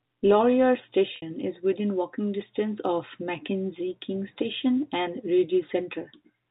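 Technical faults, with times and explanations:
1.16–1.22 s, packet loss with pitch repetition: just before "is within walking distance" the speech briefly freezes into a held, buzzy tone that thins away as normal sound returns. About 60 ms of audio went missing, which fits three lost 20 ms packets. The receiver bridged the gap by looping the last pitch period while fading it down, so the break sounds like a short drone rather than silence, within the 4 kHz telephone band of the G.711 coding.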